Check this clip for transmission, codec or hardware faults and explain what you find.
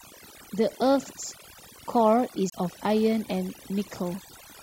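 Two faults stand out in this speech recording.

Throughout, the background drops to a twinkling residue: overdone noise removal, where an aggressive suppressor pulls down frequency bands near its noise estimate, along with quiet speech.

From 2.50 to 2.52 s, a brief mute of roughly 30 ms, then an abrupt jump: a CD skip, with the laser leaping to another turn of the disc's spiral.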